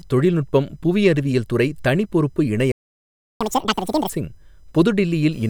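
Speech clip with a faint computer activity noise throughout: a whine pulsing at about 1 kHz, roughly 40 dB below the speech, following machine load rather than the talking, unlike steady mains hum. Right after "அறிவியல் துறை தனி பொறுப்பு", a playback stall silences the output from 2.72 to 3.41 s, about 0.69 s, likely a starved buffer or blocked player thread rather than a dropout, since the speech resumes where it stopped. A catch-up at higher speed follows from 3.41 to 4.10 s. Speech runs at double speed and roughly ten semitones higher, then snaps back, which sets it apart from a pitch-only shift.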